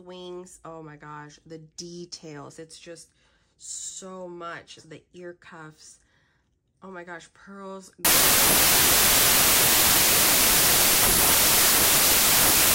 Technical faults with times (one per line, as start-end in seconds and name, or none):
8.05-12.74 wrong sample width